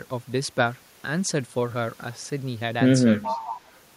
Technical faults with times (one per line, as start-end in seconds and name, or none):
3.22-3.79 echo leak